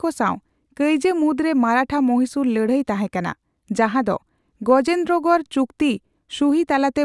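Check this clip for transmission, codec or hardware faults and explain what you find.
No technical faults can be heard anywhere in this speech recording. There is nothing in it that calls for a fault to be described.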